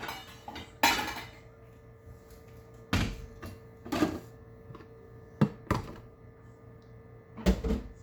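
A recording of sounds with no technical fault to be heard anywhere in the signal.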